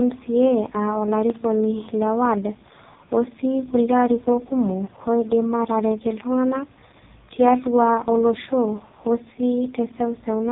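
From start to finish the speech sounds buzzy and synthetic, with nothing audible above about 3.8 kHz, so sibilants turn dull and the voice takes on a robotic edge. This is the AMR narrowband mobile codec at work: it samples at 8 kHz and rebuilds the voice from a vocal-tract model fed by sparse pulses in 20 ms frames. The heavy damage points to its lowest mode, around 4.75 kbps.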